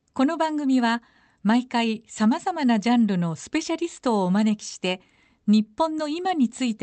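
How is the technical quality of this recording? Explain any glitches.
There are no glitches to explain in this recording. The speech carries the typical character of an Opus call connection, with high frequencies rolled off above about 8 kHz.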